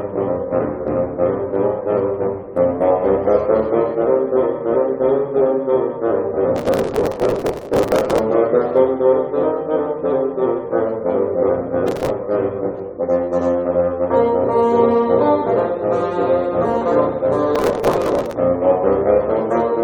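Processor overload crackle occurs three times, from 6.56 to 8.19 s, 11.88 to 12.10 s and 17.55 to 18.33 s. In each stretch the processor falls behind and misses buffer deadlines of only a few milliseconds, dozens to a couple of hundred in a row, with each missed buffer skipped outright. The resulting string of tiny hard-edged gaps chops the sound into a gritty, tearing crackle that stops once the load eases.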